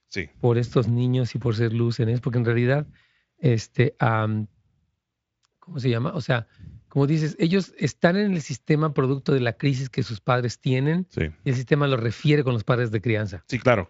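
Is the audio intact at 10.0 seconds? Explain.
Yes, the speech is intact at 10.0 seconds, with no dropout, glitch or other fault at that moment.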